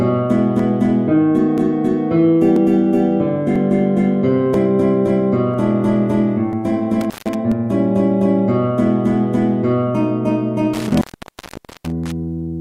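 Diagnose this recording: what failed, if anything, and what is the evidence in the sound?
Two faults are present. The first is an overlap between stream segments, at the network or playback stage. Short clicks or tiny skips fall at 0.59, 1.58, 2.56, 3.56, 4.54, 5.54, 6.53 and 7.52 s, spaced almost exactly one second apart. That regular spacing points to 1.0 s segments whose timestamps overlap. The player trims the supposedly duplicated region, which was never really doubled, so about 4 to 17 milliseconds of sound vanish and the waveform jumps at each joint.

The second fault is an intermittent contact, which belongs to the analogue wiring. Between 7.01 and 7.35 s the signal drops out, with about 0.16 s of open line bracketed by crackle. A longer break runs from 10.73 to 12.12 s, where the line stays open for about 0.83 s in total. A loose plug or cable conductor is separating and remaking contact. 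The crackle at the edges comes from the unstable connection, and while the line is open faint hiss gets through.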